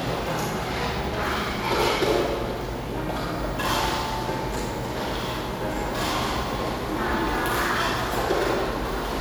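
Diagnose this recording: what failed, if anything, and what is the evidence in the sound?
Clock drift buffer slips at the driver or buffer stage, likely from two devices whose clocks differ by around 100 ppm. Clicks recur about every 1.52 s from 1.05 to 8.66 s, each where the buffer drops or repeats a handful of samples.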